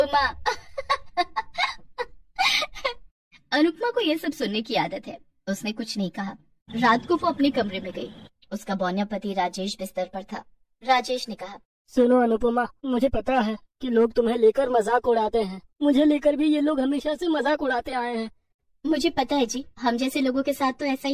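No technical faults can be heard anywhere in this clip.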